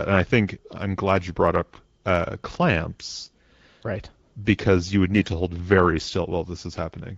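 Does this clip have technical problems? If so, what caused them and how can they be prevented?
Yes. Two bursts of AMR bit errors make the speech turn briefly hoarse and gargly, at 3.23 to 3.27 s and 5.14 to 5.29 s, between "you would" and "hold very". A weak radio link flipped a few percent of the less protected bits while the checksum still passed, so excitation pulses and fine pitch, gain and spectral values were decoded wrongly. On a spectrogram, harmonics smear into scratchy broadband texture; the waveform keeps its level but loses regular periodicity. Stronger channel coding or better signal margin prevents this.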